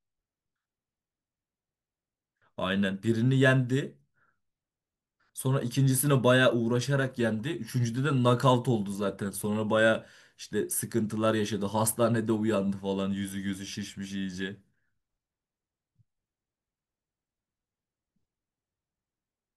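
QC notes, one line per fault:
No faults heard in this clip.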